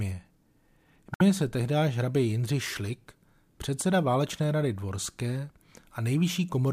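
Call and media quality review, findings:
Damaged data in a compressed stream, 1.12–1.21 s: brief disturbance, then the speech picks up at "se tehdy". Decoder side, fed bad bytes; it loses frame sync, drops the corrupt frames and resyncs on the next header. Worth checking the transport or storage path that feeds it.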